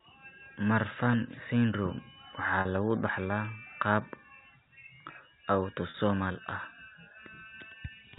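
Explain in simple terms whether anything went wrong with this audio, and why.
Packet loss with pitch repetition struck twice: at 2.61 s, just before "lagu dhaxlaa qaab", and at 5.9 s. Each time about 40 ms of sound went missing, which fits four short packets, and the receiver filled the gap by repeating the last bit of pitch, leaving a brief held, buzzy sound.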